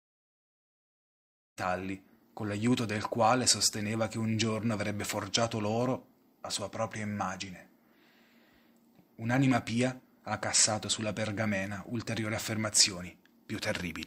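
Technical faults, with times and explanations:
No technical faults; the level rise at about 1.5 to 1.6 s is a smooth fade-in of the kind an editor applies.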